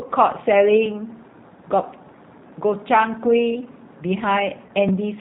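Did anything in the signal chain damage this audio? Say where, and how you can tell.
Yes. At the codec stage, the whole clip is band-limited at 4 kHz and sounds plainly rough and synthetic, which fits G.729 at 8 kbit/s rebuilding speech from pitch and filter models.

On the network side, there's VoIP packet loss concealed by the speech codec from 4.67 to 4.73 s. About 20 ms went missing, likely two 10 ms frames. The decoder stretched the last sound into a fading buzz or coloured noise, and it takes a moment to recover.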